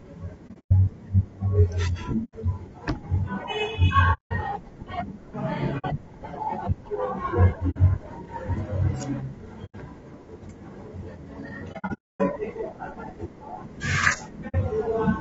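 The speech has a rough, grainy quality throughout. Noise fills the gaps between the pitch harmonics, and the top band sounds thin and synthetic. This is plainly audible low-delay AAC compression, likely AAC-ELD as used in video calls, at a rate that fits about 32 kbps. Its short frames cannot separate the harmonics cleanly. The bits run short, so detail smears into noise.

AAC frame loss with muting begins at 0.47 s. Here 180 ms of sound drops out in pieces spread over 240 ms, and the longest gap is about a tenth of a second. Further holes follow at 2.24 s (90 ms), 4.13 s (180 ms), 5.78 s (60 ms), 7.70 s (60 ms) and 9.65 s (90 ms). The worst starts at 11.72 s, with 390 ms lost across 480 ms and one gap of about 0.3 s. The last is at 14.48 s (60 ms). In each case the decoder zeroes the missing spectrum. The overlapping windows fade the sound down and back up, so each hole has soft edges.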